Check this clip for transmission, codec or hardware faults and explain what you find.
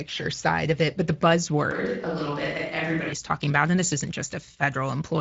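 Two faults are audible in this speech clip.

Speex codec damage, throughout: the CELP coder spends too few bits on excitation, so the voice sounds plainly noisy and hoarse, nothing above 7.7 kHz, which fits roughly 16.8 kbps.

Switch to a distant microphone, 1.71 to 3.13 s, just before "talking about and this": likely a failed close microphone. The voice turns suddenly roomy and hollow, thinner, about 5 dB quieter, with faint room noise.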